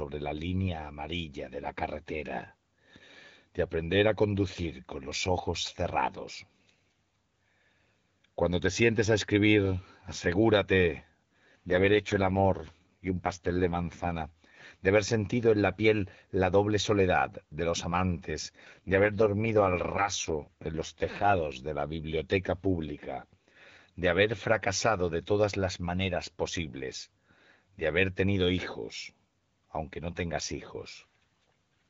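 AMR rate drop at 11.68–14.12 s and 18.63–21.60 s, after "soledad de los amantes": a weak link forces a lower rate, likely near 6.6 kbit/s, roughening the speech without gaps.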